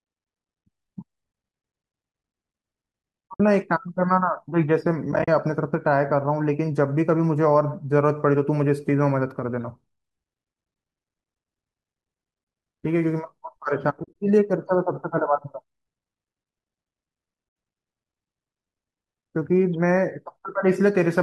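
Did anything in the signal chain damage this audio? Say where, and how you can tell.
Yes. The damage happens at the network and codec stage: AAC frames were lost in transit, and the decoder muted them, filling their spectrum with zeros. Soft-edged dropouts appear at 3.34–3.40 s, 5.12–5.28 s, 12.44–12.47 s, 14.00–14.13 s and 17.49–17.56 s. The longest runs are 60 to 70 ms of silence, and the gaps at 5.1 s and 14.0 s stutter through several short holes of up to about 40 ms. Overlapping transform windows fade the sound out and back in across each gap rather than cutting it off.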